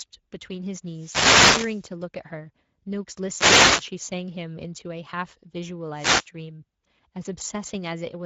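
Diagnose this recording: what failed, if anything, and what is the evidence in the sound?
Codec stage: Speex coding runs throughout the speech, with plainly audible damage. Bitrate sounds near 16.8 kbps. Too few bits for the excitation leave a hoarse, noisy grain. Nothing remains above 7.7 kHz, and the upper band is only a shaped noise fill.

Analogue radio stage: wireless microphone noise hits occur at 0.86 to 1.91 s, 3.31 to 3.89 s and 5.93 to 6.28 s. Each is a swish of static over the voice. Reflections cancel the FM signal, so receiver noise rises.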